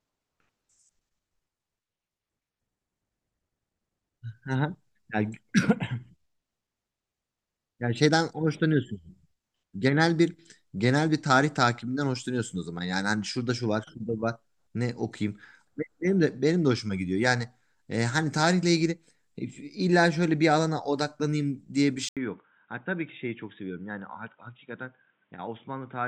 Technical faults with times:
22.09-26.07 input switched to a poorer device

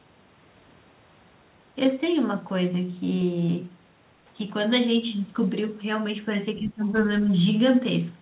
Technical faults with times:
6.60-6.99 speech suppressed in double talk

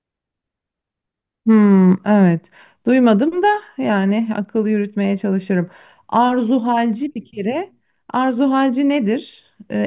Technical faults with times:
none

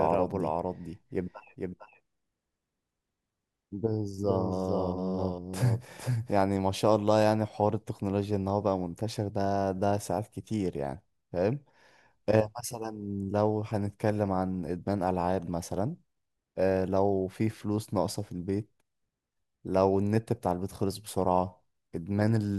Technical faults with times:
0.00-6.42 doubled audio track

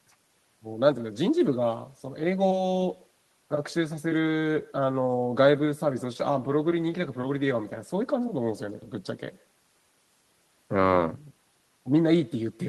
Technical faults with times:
0.00-12.69 echo with no canceller

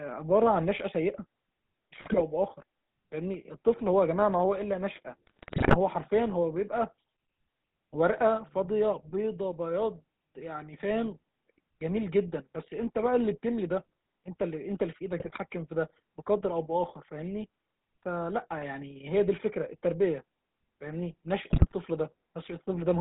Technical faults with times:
0.00-23.01 GSM full-rate codec
2.04-2.24 GSM bit errors
5.27-5.77 GSM bit errors
15.18-15.39 GSM bit errors
21.50-21.74 GSM bit errors

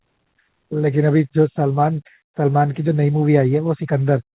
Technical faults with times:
none

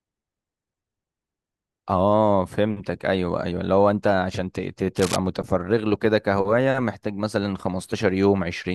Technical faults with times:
4.97-5.16 cable scratch noise

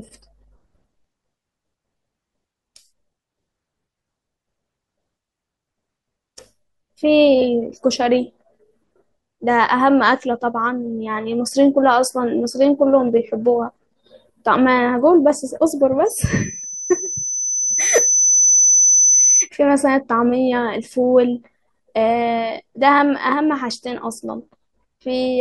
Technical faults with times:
16.06-19.49 loudspeaker feedback squeal

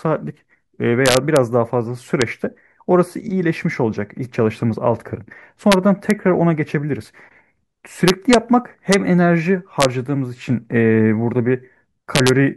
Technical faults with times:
1.06-1.36 integer overflow
2.22 integer overflow
5.72 integer overflow
6.10 integer overflow
8.08-8.34 integer overflow
8.92 integer overflow
9.81-9.85 integer overflow
12.15-12.29 integer overflow

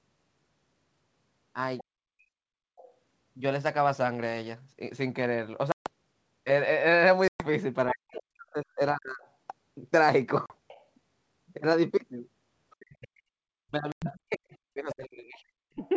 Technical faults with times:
1.78-2.93 other side's voice leaking through
1.85-2.29 speech suppressed in double talk
5.72-5.89 packet loss on an ADPCM call
7.28-7.47 packet loss on an ADPCM call
7.88-10.86 other side's voice leaking through
7.93-9.23 speech suppressed in double talk
10.46-10.53 packet loss on an ADPCM call
12.78-15.81 speech suppressed in double talk
13.92-14.05 packet loss on an ADPCM call
14.53-15.88 other side's voice leaking through

